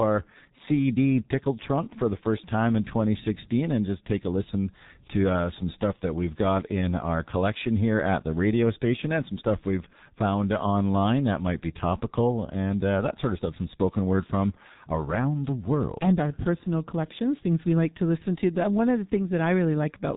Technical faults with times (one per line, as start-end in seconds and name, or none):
0.00-20.16 G.723.1 codec